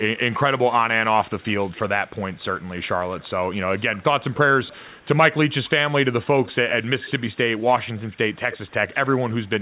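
Echo leak runs at 0.32–0.59 s, 1.39–5.07 s, 6.44–7.66 s, 7.97–8.18 s and 8.51 s to the end. A faint copy of the speech trails it by 281 to 298 ms, likely loudspeaker sound the far end's echo canceller missed. Spectrograms show syllables repeated, weaker and shifted right.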